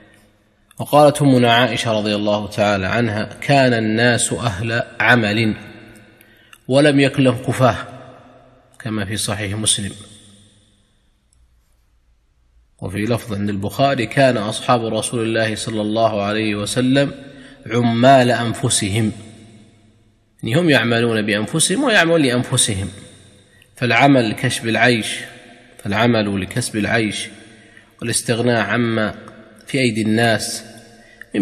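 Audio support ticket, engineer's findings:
No fault found: the signal carries no audible dropouts, distortion, timing errors or level problems, so no component is implicated and no action is needed.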